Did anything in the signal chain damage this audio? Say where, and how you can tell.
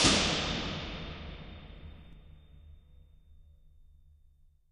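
Yes: a channel delay (doubling) at the driver or buffer stage. From 2.13 s to the end, a same-level copy trails by 40 ms. Unlike room echo, it does not decay.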